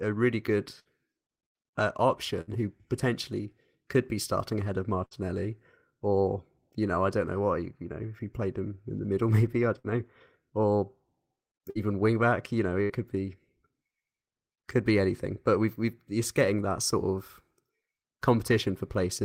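Speech with six bursts of packet loss, at 0.79, 2.41, 5.05, 9.79, 11.70 and 12.83 s. Each time, about 50 to 64 ms of concealment holds and fades the last sound. Then about 60 ms of speech is simply gone.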